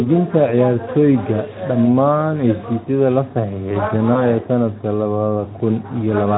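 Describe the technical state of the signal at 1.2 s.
At 1.2 s the speech is intact and there is no fault, with the Speex codec it passes through working normally at that point.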